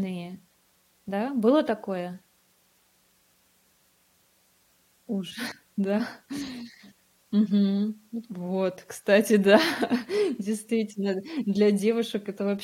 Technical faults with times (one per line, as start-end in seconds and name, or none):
2.39 damaged data in a compressed stream
5.50 damaged data in a compressed stream